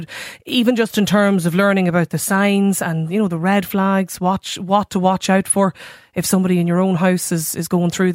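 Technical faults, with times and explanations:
Nothing in this speech recording sounds technically faulty.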